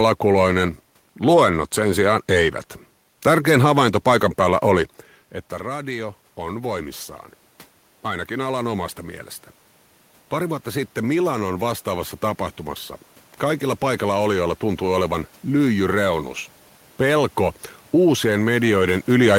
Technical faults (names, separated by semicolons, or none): automatic gain rising